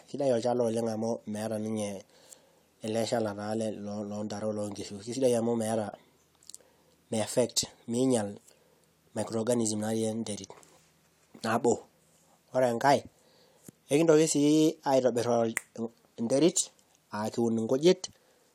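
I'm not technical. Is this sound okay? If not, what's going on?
Yes, it's fine: nothing in this recording sounds broken or glitchy, so there's nothing here you need to worry about.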